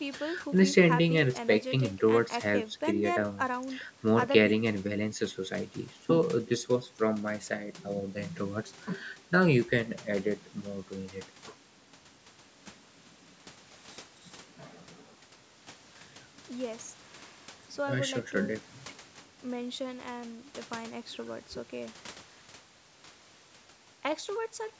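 Speech with no audible faults.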